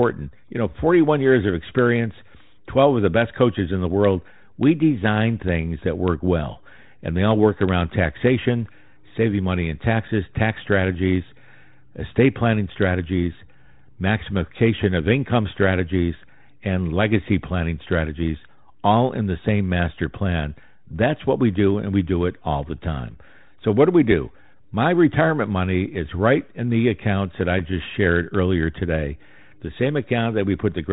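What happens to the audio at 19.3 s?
At 19.3 s the audio is intact: the speech simply carries on through the 32 kbit/s G.726 ADPCM telephone coding, band-limited to about 3.9 kHz.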